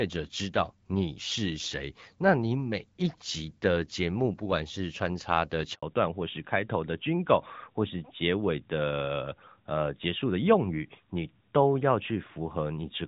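A speech recording with two call faults. At 5.75 s a handover gap silences the sound for 80 ms while the call switches networks, leaving a flat, empty stretch in the waveform until 5.83 s. From 5.83 s to the end, a fallback to narrowband strips everything above 4 kHz. The voice becomes duller and rougher, and the spectrogram shows a hard ceiling at 4 kHz where energy previously reached about 7 kHz. This fits a drop from HD Voice AMR-WB at around 12.65 kbit/s to the older AMR-NB codec at roughly 12.2 kbit/s.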